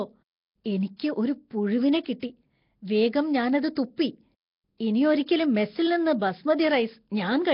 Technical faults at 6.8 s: Nellymoser compression

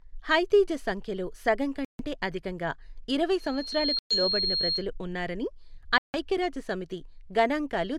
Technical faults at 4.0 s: loudspeaker feedback squeal; Bluetooth stall

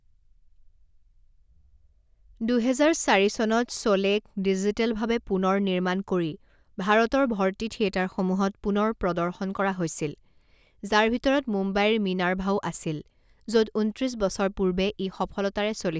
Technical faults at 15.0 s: none

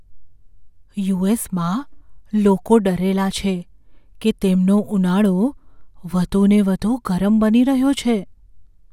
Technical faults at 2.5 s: none

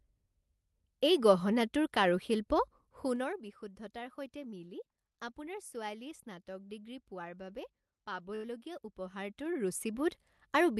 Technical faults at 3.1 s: zipper noise

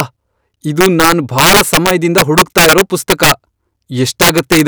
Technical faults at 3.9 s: integer overflow

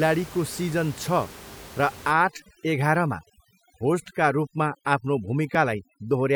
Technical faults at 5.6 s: overdone noise removal; dropped buffer (overrun)

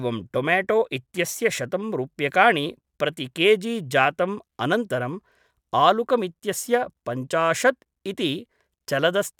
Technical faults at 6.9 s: none

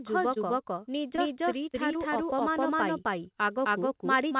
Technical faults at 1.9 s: doubled audio track; short concealed packet loss

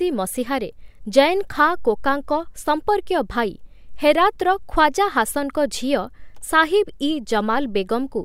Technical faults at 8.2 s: none

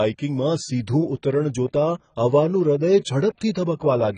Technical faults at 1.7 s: AAC compression

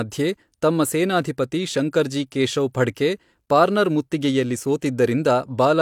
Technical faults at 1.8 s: none

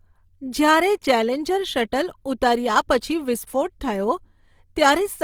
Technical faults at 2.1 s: Opus compression

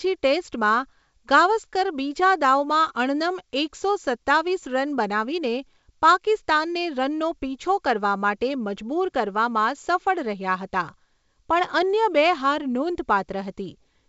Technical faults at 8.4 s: none

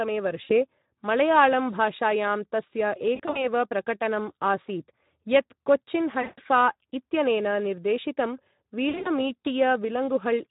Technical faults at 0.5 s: Speex codec; VoIP packet loss concealed by the speech codec

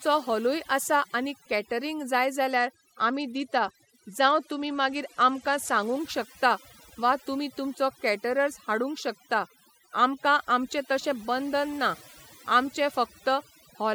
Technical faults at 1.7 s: overdone noise removal

